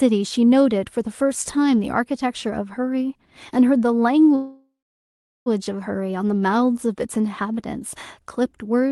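A call audio freeze runs from 4.35 to 5.48 s: the last sound is stretched into a fading buzz that drops to silence for about 0.75 s, likely because packets stalled and the jitter buffer ran dry. The speech then resumes where it stopped, losing nothing but arriving about 1.1 s late. The call codec's coding noise and the roll-off above 12 kHz, which fits Opus at around 32 kbps, can be heard throughout.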